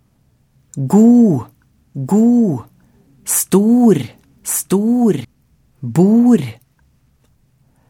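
A second copy of the audio runs underneath from 1.95 to 5.25 s, trailing the original by about a second and sitting around 5 dB quieter, so everything seems to repeat itself as a flat, full-range echo. There is no decay or room colour on it, and it cuts in and out abruptly at those edges. This is a doubled audio track, likely caused by the same signal also arriving through a slower path or by an edit holding two misaligned copies.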